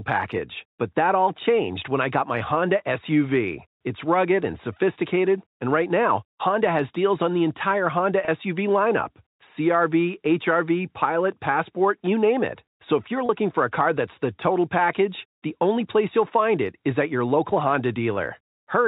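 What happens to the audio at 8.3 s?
Packet loss with pitch repetition occurs from 8.25 to 8.28 s. About 30 ms of audio goes missing, which points to a single lost packet. The receiver fills the gap by repeating the last pitch period, so the sound briefly holds with a faint buzzy sustain before continuing.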